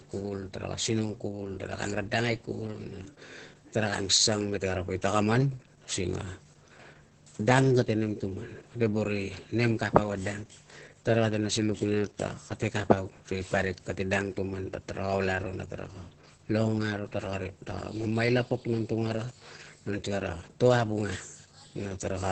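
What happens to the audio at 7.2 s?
Opus voice compression runs through the whole clip, so the speech at 7.2 s sounds hoarse, slightly robotic and muffled, with nothing above 8.4 kHz. Unlike a simple low-pass filter, the coarse SILK excitation coding also roughens the voice, which fits a bitrate near 10 kbps.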